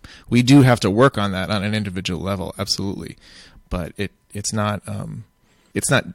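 A speech clip with one case of compressed frames skipped. At 4.44 s, just after "level absolutely but it", the audio jumps forward by roughly 20 ms. Frames of the compressed stream were missing or rejected as damaged, so the decoder never played them.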